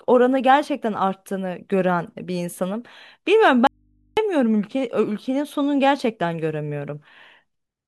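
An audio dropout to a faint residue runs from 3.67 s to 4.17 s. The speech cuts off abruptly for half a second and then returns mid-flow, with no fade either way. The gap holds only a low mains hum roughly 40 dB below the speech level. The likely cause is a brief loss of the incoming signal while the input stage stayed live, so an open, unterminated input picked up hum in place of the speech.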